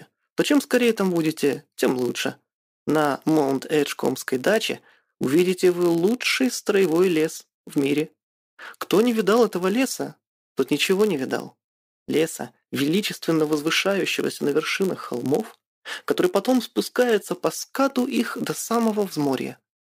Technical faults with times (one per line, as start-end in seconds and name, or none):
0.00-19.85 block size mismatch (padded)